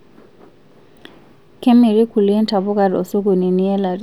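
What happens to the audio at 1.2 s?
Nothing goes wrong at 1.2 s: the speech runs through that moment intact, with no dropout, click or other fault.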